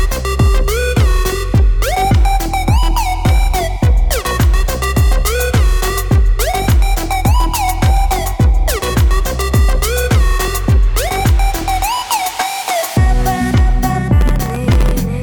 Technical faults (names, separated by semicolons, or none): processor overload crackle